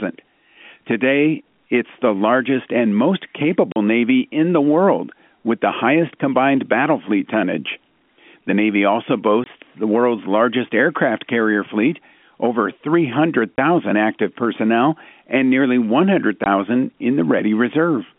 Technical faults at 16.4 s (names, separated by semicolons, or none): packet loss filled with silence